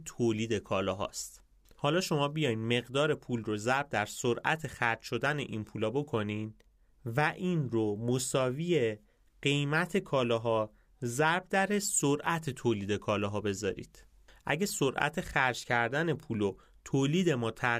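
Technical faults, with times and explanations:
No technical faults can be heard anywhere in the speech. There is nothing that needs a time or an explanation.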